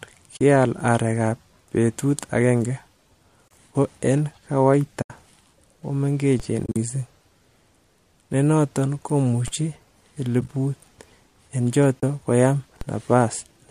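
Speech, with a lost-frame fault and a DC fault. AAC frame loss with muting means the decoder dropped frames and zeroed their spectrum, leaving soft-edged holes at 0.37–0.41 s (before "areek ab betut agenge"), 3.48–3.51 s (before "ko en"), 5.02–5.10 s, 12.01–12.03 s, and in scattered bursts over 6.64–6.76 s (longest gap about 40 ms) and 10.41–10.49 s. The 10 ms steps between gaps fit a low-delay AAC stream, likely AAC-ELD. A DC step at 6.40, 9.48 and 12.81 s shifts the waveform's zero line, heard as a low thump while the speech carries on, and each offset then dies away as though through a 20 Hz high-pass.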